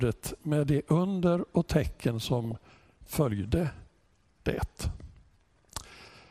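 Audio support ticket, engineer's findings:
Dull, granular sound with a gurgling edge throughout. Likely MP2 compression at a low bitrate, consistent with about 80 kbps. Too few bits per sub-band: upper bands switched off and flickering, remaining bands coarsely quantised. Damage plainly audible.

DAB burbling, 2.45 to 3.13 s. Noise blips over the programme. Reception bit errors, at about 0.4%, slipped past error correction into MP2 frames. Corrupted samples put noise blips in single sub-bands.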